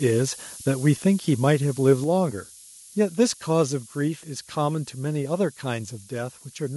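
A steady, thin hiss sits under the speech from start to finish, rising sharply toward the top of the band and only around 25 dB below the speech. This is low bit depth with noise shaping: the coarse quantisation, consistent with 8 bits, leaves rounding error that feedback pushes up into the treble.

At 1.02 s, 2.04 s and 4.08 s the speech and background drop abruptly in level, by about 2 dB, 4 dB and 2 dB. These steps are likely the microphone volume being stepped down by call software that lowered the input gain each time.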